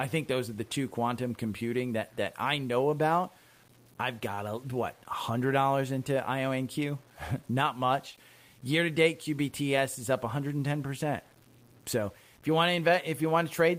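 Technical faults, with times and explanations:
throughout: low bit depth without dither. The speech was likely truncated to a very coarse word length, which fits 8 bits, without dither. The rounding error rides on the voice at roughly 30 dB below it, so quiet passages turn gritty and grainy, and the decays sputter as the level shifts.
8.11–8.16 s: short stall from a late packet. A packet arrived late and the jitter buffer ran dry, so the receiver held the last sound for 22 ms until the data came. Nothing is lost, but the speech briefly hangs with a slight buzz or dip, then resumes about 22 ms later than before.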